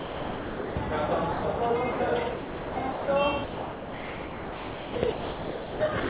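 Sound dropped by the voice detector is the likely cause of eight gaps at 0–0.76, 1.32–1.44, 1.92–2.0, 2.32–2.76, 2.92–3.08, 3.44–4.96, 5.12–5.8 and 6.0–6.09 s, the longest 1.52 s. In each, the sound yields to steady, featureless hiss instead of repeated or smeared fragments like loss concealment, then returns once transmission resumes. Throughout, nothing reaches above 4 kHz, which fits a narrowband call codec such as G.711.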